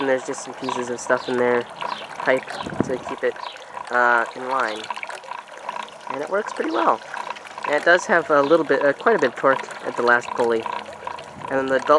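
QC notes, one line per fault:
No fault to note.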